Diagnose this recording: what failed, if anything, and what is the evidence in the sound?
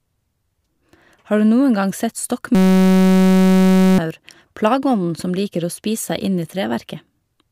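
System hang loop, driver or buffer stage: after "gang sett", 2.55 to 3.98 s becomes a steady 188 Hz buzz of one exactly repeating 5.33 ms slice, not a dropout's silence.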